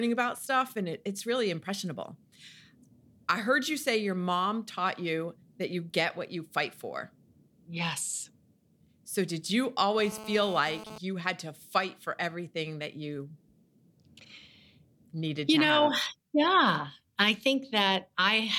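A speech recording with one fault. From 9.99 to 10.98 s a hard, raspy buzz appears at about 217 Hz, rich in harmonics and unrelated to the speech. This is GSM phone buzz. A nearby 2G phone sends data in bursts, and the audio circuit rectifies them. It sits about 15 dB below the speech.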